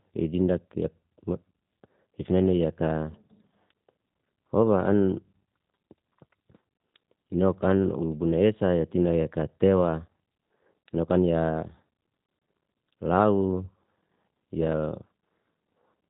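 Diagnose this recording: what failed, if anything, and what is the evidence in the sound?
The failure is at the codec stage: G.729 coding runs through the whole speech recording. Nothing passes above about 3.8 kHz, and the voice has a plainly audible rough, synthetic edge. Speech is rebuilt from a vocal tract filter, pitch predictor and sparse pulses, consistent with an 8 kbit/s G.729A stream.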